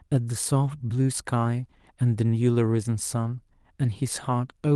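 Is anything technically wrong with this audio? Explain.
Yes. A lost packet rebuilt from error correction occurs from 0.63 to 0.69 s. Two separate packets went missing, and the decoder filled the roughly 40 ms with the lower-bitrate backup copies carried inside the following packets, so there's no gap, just a brief rougher, noisier patch within the 12 kHz-wide Opus call audio.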